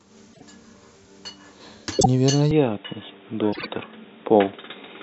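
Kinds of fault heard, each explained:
Frames out of order: Neighbouring blocks of audio were played back swapped, giving brief garbled flutters near 0.33, 1.99 and 3.52 s. The last swaps 48 ms blocks, the others 24 ms. Unlike a dropout or skip, nothing is missing.
Input switched to a poorer device: From 2.51 s the sound turns dull and boxy, with nothing above 3.8 kHz and a faint new background noise well below the signal. This is likely a change to another microphone or headset. A plain low-pass filter would not bring new noise, and here there is no gap or level jump.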